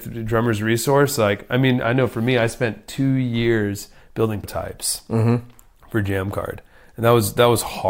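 A speech recording with damaged data in a compressed stream at 4.44 s: a stretch of the encoded bytes there is corrupt, so the decoder misreads that frame, loses sync and hunts for the next valid frame header, leaving a single short glitch in the audio.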